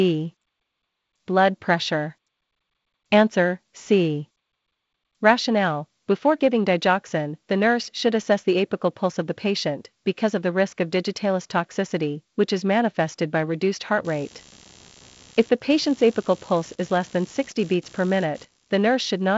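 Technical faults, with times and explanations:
14.05 to 19.37 s, computer activity noise: starting just after "manifested by reduced heart", changing load in the computer (processor, graphics or mouse activity) shifts the ground that the audio circuit shares, and that disturbance leaks into the signal. It sounds like a buzzy, scratchy pulsing at roughly 70 times a second, sitting around 25 dB below the speech. It runs to the end of the clip and follows the machine's activity, not the speech, over the band-limited G.722 wideband sound.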